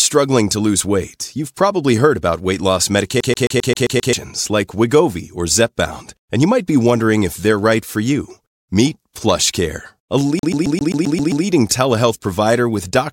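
Right after "heard about weight loss", from 3.20 to 4.13 s, the audio gets a CD stuck on one turn: a scratch keeps bouncing the laser back, so a 0.13 s slice repeats seven times with tiny mutes between. It happens again from 10.39 to 11.45 s, eight repeats, just before "telehealth provider with doctors".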